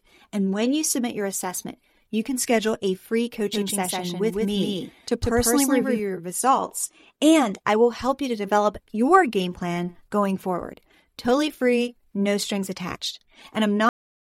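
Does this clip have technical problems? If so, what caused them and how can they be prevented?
Yes. Doubled audio track, 3.53 to 5.99 s: a second full-band copy, as loud as the original, trails by roughly 150 ms, most likely from a slower capture path recording the same source twice. Route each source through only one input and mute duplicate monitoring or loopback paths before recording.

Cut-off end at 13.89 s: the speech stops mid-sound and drops straight to digital silence with no decay, because the final buffers were never written. Stop recording only after the buffers have flushed, and leave a short tail of room sound after the last phrase.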